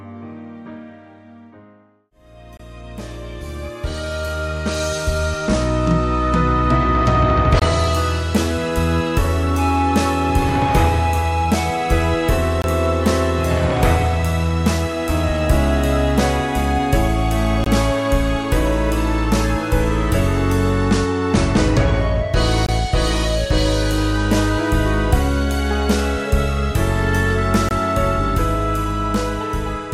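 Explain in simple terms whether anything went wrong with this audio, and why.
There's a gap between chunks problem: short, hard-edged silences of about 23 ms at 2.57–2.60, 7.60–7.62, 12.62–12.64, 17.64–17.66, 22.66–22.69 and 27.69–27.71 s. They come every 5 seconds, so the audio was handled in 5-second pieces with a bit of silence left at each join.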